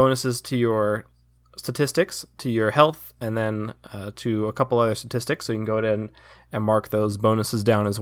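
Nothing technical stands out in this speech recording; it sounds fine the whole way, with no problems to point to.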